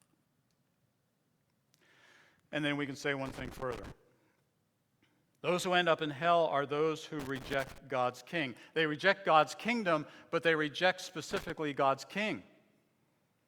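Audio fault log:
3.26–3.92 s, 7.20–7.78 s, 11.31–11.50 s: loose connector crackle. Three irregular bursts of scratchy crackle break into the speech, just after "then we can say", "hell are those who" and "kingdom but they reject". The last burst is the shortest, at about 0.19 s. A worn or dirty contact is making and breaking rapidly. Each break chops the signal. Any DC on the line turns the make-and-break into pops, so the bursts sound rough and uneven.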